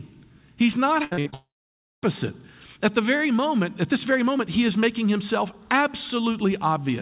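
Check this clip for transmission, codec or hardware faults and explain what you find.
Two network faults appear back to back in this speech, running from 1.04 s to 2.04 s. The call codec's band limit is audible too, with nothing above 4 kHz, which fits G.711 A-law at 64 kbps.

Repeated packet loss (robotic sound) occurs from 1.04 s to 1.34 s. Four gaps arrive in quick succession, the longest 72 ms. Each is patched by repeating the last sound. About two thirds of the stretch is concealed, so the speech turns choppy and robotic.

A long network dropout follows from 1.34 s to 2.04 s. The receiver first stretches the last sound into a brief fading buzz or hiss. Then about 0.56 s of silence remains. Audio resumes afterwards with that portion gone. A lengthy loss of incoming packets is the likely cause.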